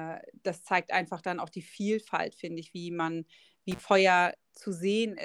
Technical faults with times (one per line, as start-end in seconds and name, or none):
3.71-3.80 intermittent contact